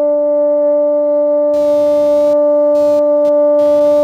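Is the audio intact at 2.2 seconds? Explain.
No, at 2.2 seconds the music carries computer activity noise, running from 1.53 s to the end: changing computer load shifting the shared ground, heard as a buzzy chirp pulsing around two hundred times a second, roughly 30 dB below the music.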